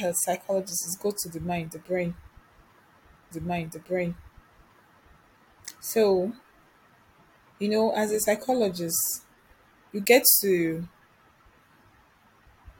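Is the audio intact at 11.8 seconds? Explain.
Yes, the speech at 11.8 seconds comes through intact, with no dropout, click, distortion or other audible fault at that moment.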